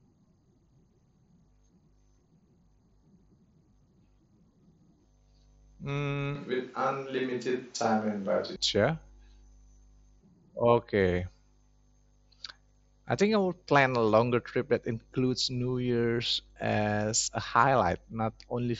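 From 6.35 s to 8.56 s the close microphone's feed appears to drop out, most likely a switch to a distant microphone. The speech turns roomy and hollow with thinner bass and room noise about 30 dB below it, at much the same loudness, before snapping back.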